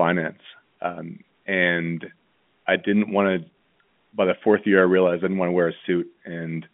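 Speech on a telephone line with G.711 A-law coding, its band running from about 150 Hz to 3.4 kHz, shows no technical fault anywhere in the recording.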